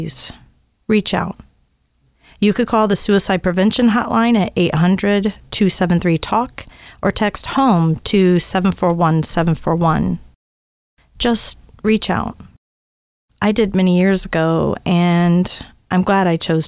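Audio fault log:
No faults can be heard anywhere in this audio.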